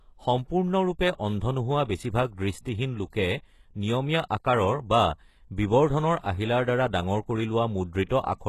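From the start the speech carries plainly audible coding damage, likely from HE-AAC compression at a low bitrate, consistent with about 16 kbps. Only the lower spectrum is coded directly, and the treble is rebuilt by copying lower bands upward under a coarse envelope, so s sounds come out gritty and lispy. On a spectrogram the upper region looks blocky and repeated rather than finely detailed, with a hard ceiling at 12.3 kHz and nothing above it.

At 3.10 to 3.13 s a pre-echo appears. A sharp onset falls late in a transform block, so quantisation noise sized for the loud attack spreads back over the quiet moment before it. About 28 ms of hiss leads the attack, which sounds softened. A second pre-echo follows at 8.06 to 8.10 s, right after "ডাঙৰ কৰি", with the smear stretching about 41 ms. On a waveform each appears as a fuzzy low-level ramp ahead of the transient, and on a spectrogram as a faint broadband haze before the attack's vertical edge.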